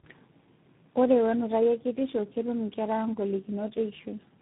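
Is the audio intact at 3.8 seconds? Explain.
No. At 3.8 seconds, as throughout, the audio has tandem speech coding: it passed through about three low-rate speech coders in a row, each re-encoding the last one's degraded output. The speech sounds rough, muffled and warbly, with nothing above 3.8 kHz.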